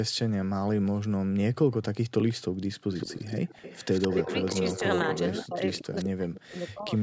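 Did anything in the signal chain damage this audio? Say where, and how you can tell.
Yes. Echo leak at the call-processing stage: a delayed copy trails the speech by 168 ms at 2.29, 2.93–4.8, 5.04–5.47, 5.97–6.09 and 6.97 s onward. The fixed lag, unlike reverb, likely points to incomplete echo cancellation.

Speech suppressed in double talk, also in call processing, from 5.47 to 6.92 s: the talker drops by up to roughly 40 dB, for about a second in total, while the other side speaks. These gaps likely track the overlap rather than network timing.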